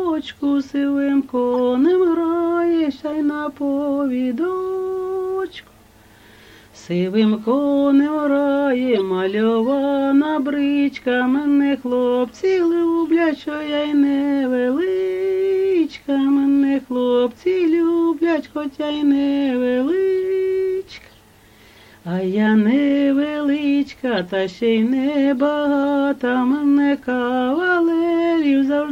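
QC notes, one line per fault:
1.54 to 1.56, 8.96, 12.52 and 24.18 s: corrupt frame decoded. Damaged compressed frames, about two each (one at 12.52 s), were decoded anyway, misplacing energy in frequency and leaving a brief chirp, squeak, blip or noise burst peaking around -15 dB (about -20 dB at 12.52 s).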